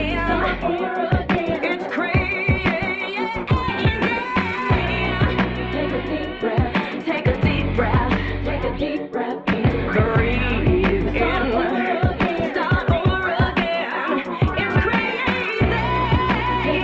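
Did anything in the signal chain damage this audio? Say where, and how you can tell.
No, nothing in the chain damaged this audio: it arrives through a WebRTC call path with Opus coding, and its top end stops around 8 kHz, which fits a wideband setting of that codec at a moderate bitrate rather than any fault.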